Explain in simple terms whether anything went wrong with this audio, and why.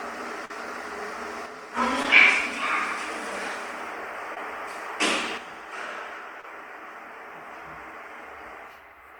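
Brief smears or wobbles interrupt the sound at 0.45–0.51, 2.03–2.05, 4.34–4.37 and 6.41–6.44 seconds. This is short concealed packet loss: tiny pieces never arrived, so the receiver stretched the preceding sound to cover each gap.

At 1.46–1.77 seconds, and again from 5.38 seconds to the end, the sound turns abruptly quieter. The likely cause is that one channel drops out, leaving only half of the stereo mix.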